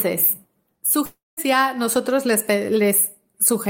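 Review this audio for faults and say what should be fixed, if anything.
From 1.05 to 1.39 s the speech breaks off. The last sound is stretched into a fading buzz, then near silence for about 190 ms, and about 320 ms of speech is lost before it resumes at "nosotros les". This is likely a long network dropout. On a spectrogram, harmonics smear into a decaying band and then an almost empty column; the waveform's envelope shrinks to a flat line. A larger jitter buffer with forward error correction would prevent it.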